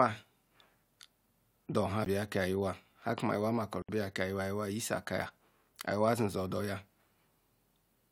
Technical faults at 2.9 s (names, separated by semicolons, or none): none